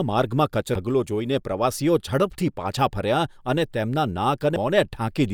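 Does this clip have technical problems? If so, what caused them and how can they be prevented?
Yes. Damaged data in a compressed stream appears at 0.75 to 0.78 s and at 4.56 s: corrupted bytes make the decoder misread frames and lose sync, producing brief blips in the speech. Prevent it with checksummed, error-protected transfer and verified file copies.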